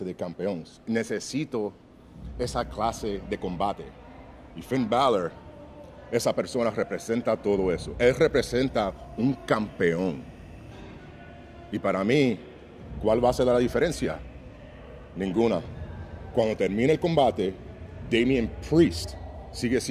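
From 8.38 to 10.81 s, timecode bleed appears. Linear timecode from a nearby track or cable has leaked into the audio. Its square wave flips between tones near 1 and 2 kHz, fitting 23.976 fps code. It sits about 40 dB down as a faint chirping warble.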